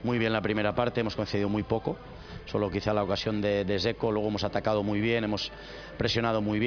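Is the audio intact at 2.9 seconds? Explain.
Yes, at 2.9 seconds the audio is intact, with no dropout, click, distortion or other fault to be heard at that moment.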